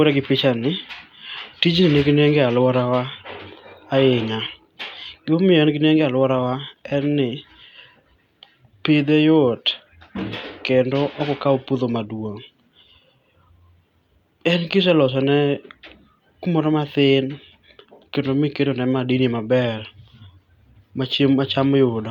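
No technical faults are audible.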